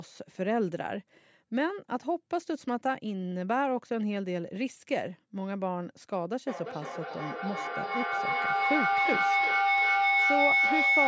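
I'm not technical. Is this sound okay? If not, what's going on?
No. From about 6.47 seconds to the end of the clip there is a feedback howl. Two devices in the same room are on the call, so the loudspeaker's sound is picked up by the microphone again and again, getting louder each time. It settles into a high whistle around 2 kHz, with the sound coming back around about every 0.3 seconds, and grows until it is louder than the speech. It keeps going until the loop is broken, for example by muting one device.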